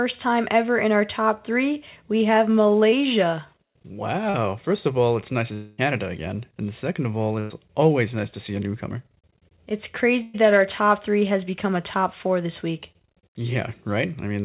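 At 2.90 to 2.94 s there is a short concealed packet loss. About 20 ms of audio did not reach the decoder in time. The receiver stretched the preceding sound over the hole and blended back into the real signal. It is heard as a tiny smear. A second one follows at 4.30 to 4.36 s. Here 40 ms went missing and was filled the same way, giving a slightly longer wobble.

From 5.54 to 5.80 s the sound turns into a fading buzz or hiss for about 240 ms. It never drops to silence. When the audio returns, it has skipped ahead, and the missing stretch is gone. The cause is likely a long network dropout: nothing arrived, so the receiver kept extending the last sound and lowering it.

At 7.40 to 7.52 s comes a burst of packet loss. Roughly 100 ms in a row was lost or arrived too late. The receiver carried the last sound forward as a decaying buzz or hiss, then resumed further on without the gap's content. 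Another burst hits at 10.22 to 10.36 s, covering 120 ms. It sounds the same: a brief fading fill, then a jump back into the audio.

All of this rides on a call path with nothing above 4 kHz, which points to a narrowband G.711 mu-law link at 64 kbps.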